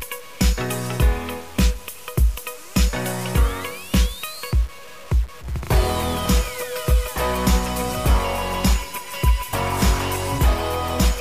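Throughout, the audio was likely truncated to about 6 bits without dither, so a gritty distortion that tracks the sound sits only around 25 dB below it.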